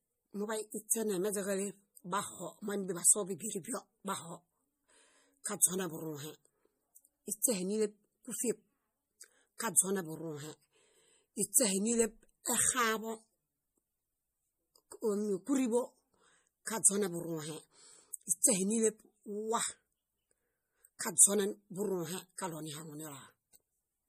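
Throughout the speech, the treble stops dead at 15.2 kHz. Weak detail flickers in and out, giving a watery, swirly texture, and s sounds turn metallic. This is likely MP3 compression at a low bitrate, around 40 kbps, discarding quiet frequency content frame by frame.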